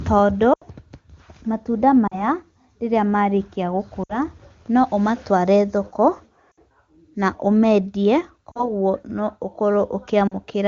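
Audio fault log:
0.53 to 0.62, 2.07 to 2.24 (before "rĩrĩa marĩkia"), 4.03 to 4.18 (between "rĩrĩa marĩkia" and "no ũmatware thoko"), 6.51 to 6.59, 8.52 to 8.72 (after "na ũmeendie"), 10.27 to 10.35 s: lost AMR speech frames. Gaps of 40 to 80 ms are patched by repeating the last good sound with falling level. Each drops to near silence within two frames against the clear wideband speech. Then the voice returns weak or rough for a moment.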